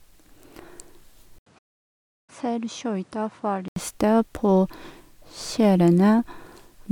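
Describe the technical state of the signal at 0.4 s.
At 0.4 s the speech signal is intact, with no audible technical fault at that moment.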